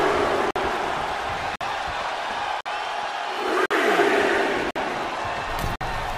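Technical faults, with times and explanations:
0.51–0.56 s, 1.56–1.61 s, 2.61–2.66 s, 3.66–3.71 s, 4.71–4.76 s and 5.76–5.81 s, gap between chunks: the audio was handled in 1.0 s blocks with 50 ms of silence left at every join. No sound goes missing, but it briefly cuts out, once a second.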